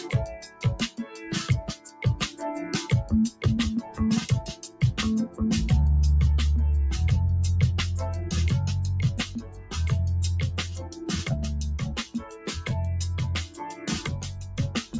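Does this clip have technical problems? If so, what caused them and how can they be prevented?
Yes. A noise suppressor applied to music or sounds runs throughout, making the sound pump, flutter or thin out with swings of about 15 dB because it mistakes sustained tones and reverb for noise. To prevent this, switch off speech noise suppression or use a music mode when sending non-speech audio.

Sound cut by the noise suppressor occurs at 0.00–2.42 s, 3.31–5.40 s, 9.26–9.74 s, 10.67–11.00 s, 12.07–12.69 s and 13.44–14.97 s, with held parts and decays dropping by about 9 to 13 dB. To prevent this, bypass the suppressor or lower its strength.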